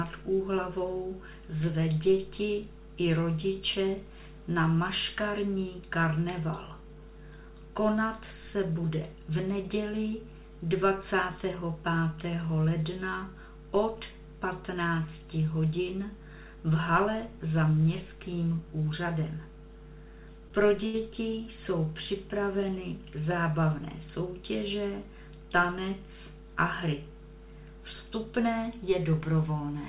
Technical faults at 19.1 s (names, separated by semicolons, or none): none